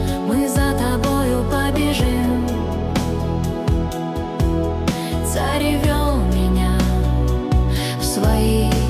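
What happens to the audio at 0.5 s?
Nothing goes wrong at 0.5 s; the audio is intact at that moment, with no dropout, click, distortion or other fault to be heard.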